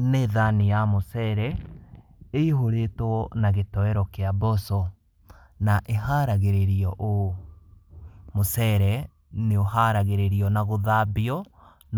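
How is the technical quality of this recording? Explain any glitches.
Nothing stood out as a technical problem on listening to this recording.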